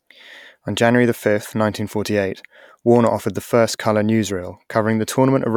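No technical fault can be heard anywhere in this speech recording. At no point does anything in the audio go wrong.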